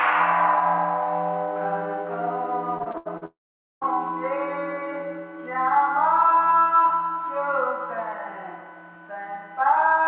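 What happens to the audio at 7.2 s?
Nothing goes wrong at 7.2 s: the sound carries straight through that moment without a break, with only the narrow telephone-style bandwidth of the call path, which leaves nothing above 4 kHz.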